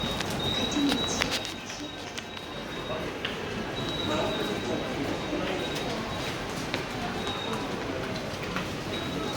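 No technical faults can be heard anywhere in this recording of sounds. There is no moment that needs a time mark or an explanation.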